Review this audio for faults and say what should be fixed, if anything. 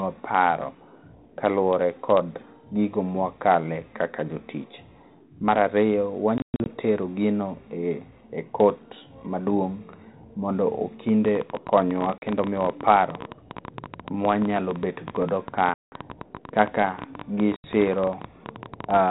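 Packet loss on an ADPCM call occurs at 6.38 to 6.72 s, 12.18 to 12.23 s, 15.74 to 15.93 s and 17.56 to 17.66 s. The first loses 200 ms in gaps over 280 ms, the longest 120 ms. The others lose 40, 180 and 80 ms. Each gap is a hard-edged silence. The decoder's predictor and step size then disagree with the sender's, so speech resumes with brief distortion. Use a jitter buffer with concealment and decoder state reset to stop this.

A train of clicks runs from 11.09 to 19.01 s. It brings around a hundred similar pulses at about 14.5 per second, spaced irregularly. The loudest rise roughly 10 dB above the speech. They tick through pauses as well. The likely cause is interference from nearby equipment or a faulty connection or power supply. Shield or reroute cabling and check the interface to prevent it.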